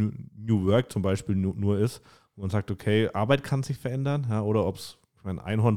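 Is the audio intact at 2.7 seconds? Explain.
Yes, the speech at 2.7 seconds plays through cleanly, with no dropout, click, distortion or other fault at that moment.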